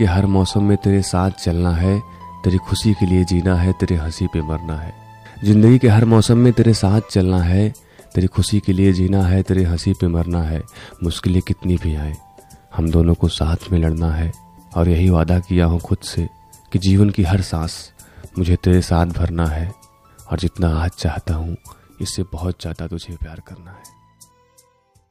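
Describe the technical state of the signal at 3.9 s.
At 3.9 s the signal is intact, with no technical fault to be heard at that point.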